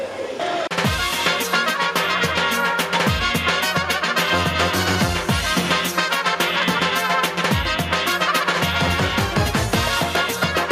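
The input gain was likely set far too high for the microphone, leaving a fast limiter or compressor to pull the level down on every loud sound, and this gain pumping runs throughout the clip. The level swings by around 10 dB. Loud and quiet passages sit much closer together than they should, giving the sound a squashed, breathing quality.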